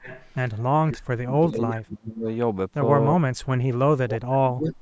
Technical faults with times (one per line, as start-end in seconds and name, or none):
0.00-0.26 echo leak
0.92-2.27 speech suppressed in double talk
3.95-4.78 speech suppressed in double talk